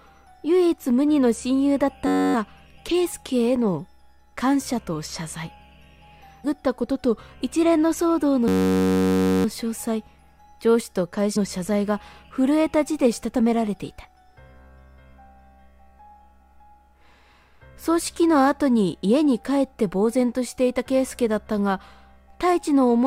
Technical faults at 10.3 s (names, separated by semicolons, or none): none